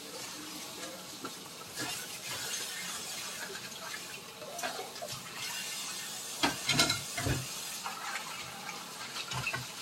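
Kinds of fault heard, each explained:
No faults heard in this audio.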